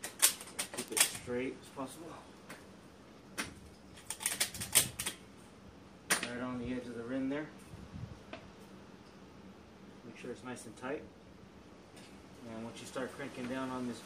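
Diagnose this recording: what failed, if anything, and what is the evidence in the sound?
Bit error spikes at 0.88 s and 4.80 s, each a single sharp tick unrelated to the surrounding sound. The first peaks at about -22 dBFS and points to one corrupted sample. The second, louder at about -16 dBFS, sounds like a short run of perhaps three samples. The fault lies in digital storage or a digital link: a flipped bit throws a sample's value off by a power of two, and the next sample is correct again, so the error is a broadband click.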